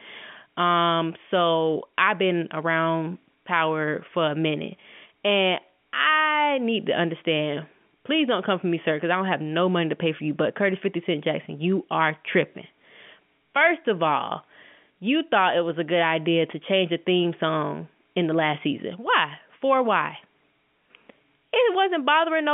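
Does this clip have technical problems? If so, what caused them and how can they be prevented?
No, this speech comes through a G.711 A-law telephone line at 64 kbps, limited to roughly 150 Hz to 3.4 kHz as that channel is, and there are no technical faults to report or prevent.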